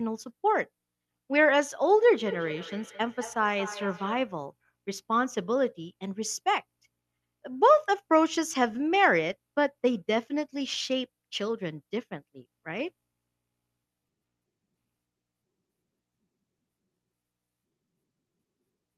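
Speech, with feedback echo between two devices from 2.25 to 4.4 s: words come back about every fifth of a second, peaking around 15 dB below the voice.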